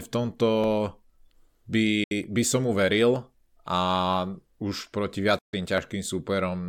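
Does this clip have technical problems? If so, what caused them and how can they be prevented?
Yes. Two kinds of fault are audible in this speech clip.

Dropped samples: a tiny slice of the stream, roughly a third of a millisecond, was most likely skipped somewhere in the playback or capture path, so the waveform leaps straight to a later value. Nothing audible is missing, but each jump produces one sharp click: at 0.64 s, right after "v tomto"; at 3.16 s, just after "by by som mu"; and at 5.78 s. Keeping buffers adequately sized and avoiding CPU overload on the audio thread prevents these skips.

Bluetooth dropout: wireless audio packets likely failed to reach the headphones in time and were discarded, so output fell silent until valid packets resumed. The first hole runs from 2.04 to 2.12 s, losing about 70 ms just before "by som mu", which fits roughly three lost packets. The second runs from 5.39 to 5.53 s, losing about 140 ms, consistent with around six packets. 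In both gaps the speech picks up further along, as if it had kept playing. Staying close to the receiver, reducing 2.4 GHz interference, or using a wired connection prevents these gaps.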